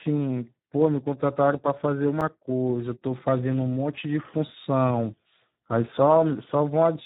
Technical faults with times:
0.00-7.06 Speex codec
2.21 block of digital silence

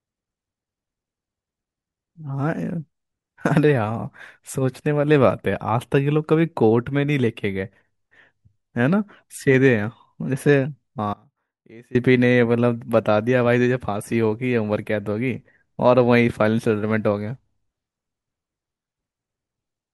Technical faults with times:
11.14-11.95 audio dropout to a faint residue

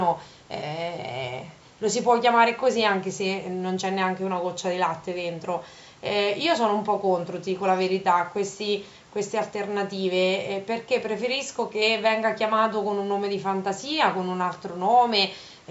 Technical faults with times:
none

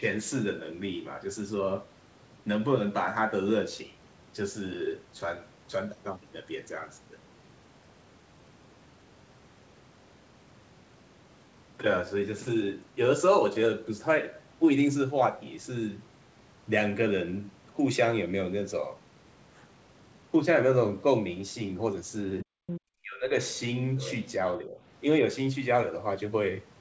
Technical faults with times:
22.43-22.48 speech suppressed in double talk
22.67-22.80 other side's voice leaking through
23.02-23.35 speech suppressed in double talk
23.98-24.19 other side's voice leaking through
24.63-24.77 speech suppressed in double talk

